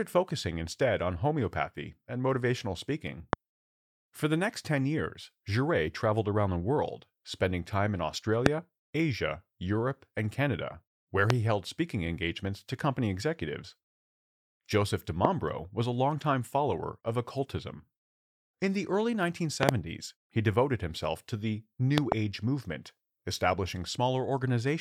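Loud pops strike the speech at 3.33, 8.46, 11.30 and 15.25 s, then doubled at 19.63 and 21.98 s. Each peaks roughly 25 dB above the speech, likely from a sudden voltage pulse.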